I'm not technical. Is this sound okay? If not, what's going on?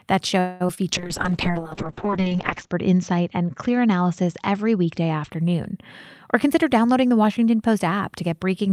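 No, there are four separate problems.

From 0.39 to 0.62 s there is a call audio freeze: the sound stalls and the last bit is stretched into a fading buzz or hiss for about a fifth of a second, likely because the network briefly held back the audio. Nothing is lost. The sound picks up exactly where it stopped, just later. That is the difference from the next fault, where real sound is actually missing.

At 0.66 to 0.71 s and again at 0.75 to 0.79 s there is short concealed packet loss. Each time, a tiny slice of sound never arrived, and the phone covered the hole by guessing from what came just before. You hear a quick smear or wobble rather than a pause, and a short sound can disappear. Unlike the freeze, nothing is delayed. The sound carries on as if the slice had been there.

From 0.93 to 5.37 s there is a call bitrate drop. The connection told the phone to send far less detail, so the speech turns rough, watery or muffled, with everything above 8 kHz cut away. 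It is worst for nearly two seconds. This is a long change in quality, not a brief glitch, and the timing is unaffected.

From 6.35 to 7.25 s there is a jitter buffer speed-up. Audio had built up waiting to be played, so the phone snipped out many tiny pieces, roughly 70 ms in total, to catch up. Speech runs about 8% faster but keeps the same pitch, so it sounds slightly hurried rather than squeaky. That unchanged pitch is the clue that it is catch-up trimming and not simply a fast playback.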